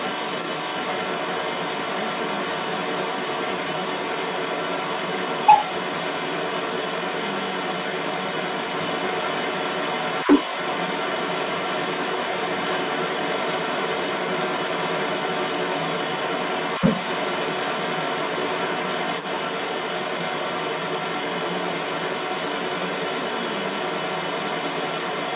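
From the start to the end at 25.36 s, the other side's voice leaks through, most likely because the echo canceller failed to remove the far-end voice from the microphone pickup. A second voice runs throughout, strong enough to sit above the main talker, within the narrow, 4 kHz-limited G.711 call band.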